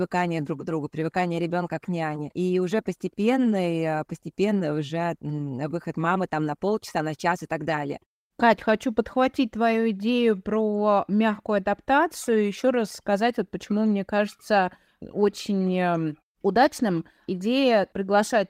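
The speech signal shows no technical faults, and the background falling silent in the pauses before returning in time for the next sound is the expected behaviour of muted pauses.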